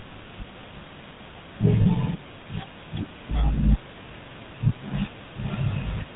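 The whole recording passed through the GSM full-rate codec. The codec rebuilds the voice from a vocal-tract model driven by a coarse, regularly spaced pulse train and discards everything above 4 kHz. The damage is plainly audible: the speech has a buzzy, gravelly roughness and a dull, band-limited top, and the overall quality fits the old 13 kbps GSM channel.

From 1.82 to 1.87 s there are lost GSM frames. The decoder had no valid data for this gap, so it reused the parameters of the last good frame. The speech briefly freezes into a rough, metallic ring before normal sound resumes. The length of the gap points to about two missing 20 ms frames, roughly 40 ms of audio.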